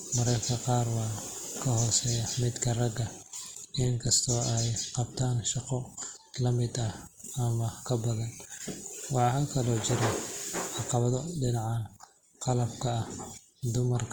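Speech, with Opus compression damage plainly audible from start to finish. The sound turns rough and grainy rather than swirly. Bands short of bits are filled with folded or noisy content. Audio still reaches about 20.3 kHz, fitting the likely music (CELT) mode near 24 kbps.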